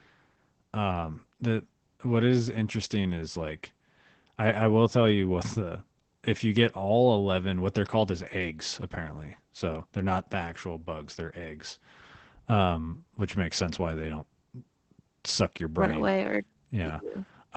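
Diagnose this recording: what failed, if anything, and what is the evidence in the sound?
Codec stage: Opus voice compression throughout the speech. A spectrogram shows a flat ceiling near 8 kHz with blurred, grainy harmonics below it, and the voice sounds muffled, hoarse and faintly robotic. That points to SILK mode near 12 kbps, coding the excitation coarsely.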